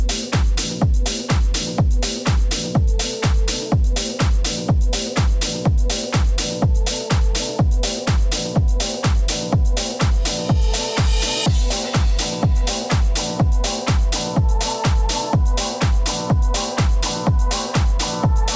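No technical faults are audible anywhere in the recording.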